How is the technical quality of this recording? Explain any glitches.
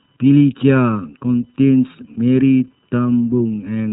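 The technical quality is poor: three faults run through the whole speech clip.

Computer activity noise sits under everything, a faint buzzing chirp pulsing at roughly 1 kHz, about 45 dB below the speech. Changing load from the processor, graphics card or mouse shifts the ground shared with the audio circuit, so the interference follows the machine's activity rather than the talker. On a spectrogram it appears as a thin line near 1 kHz, with a fine ripple on the waveform during pauses.

Channel delay (comb filtering) makes the voice hollow and phasey. One channel trails the other by about 0.7 ms, and when the two are summed to mono, content common to both cancels at evenly spaced frequencies, with the first notch around 700 Hz. A spectrogram shows fixed dark horizontal bands through every word, spaced at regular intervals up the frequency axis, and they stay put no matter what is said.

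iLBC codec damage is plainly audible as a rough, slightly synthetic edge on the voice. This narrowband VoIP codec codes each frame's excitation independently, and the blockiness here fits 30 ms frames at a bitrate near 13 kbps. Everything above 4 kHz is gone, which on a spectrogram is a hard ceiling with nothing over it.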